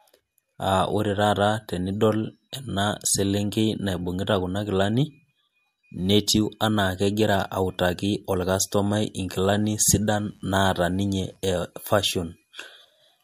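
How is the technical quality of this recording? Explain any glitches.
A short burst of mains buzz intrudes on the speech from 9.43 s to 11.36 s. It sits faint, well below the speech level. Its base is 50 Hz, the European mains rate. Something like a dimmer, a rectifier or an unshielded cable injects sharp switching spikes twice per mains cycle. Those spikes carry a stack of 50 Hz harmonics up into the kilohertz range. The result is a steady, raspy buzz rather than a smooth hum.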